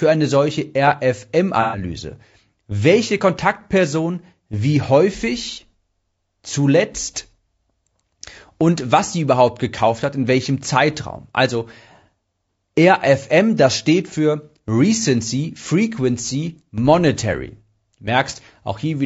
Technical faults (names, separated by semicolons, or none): low-delay AAC compression; AAC frame loss with concealment